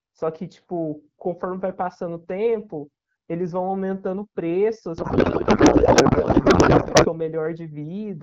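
Speech, where from 4.97 to 7.09 s the voice turns to garbled, warbling noise: a codec payload misread, with AMR-WB frames likely unpacked in the wrong packing format.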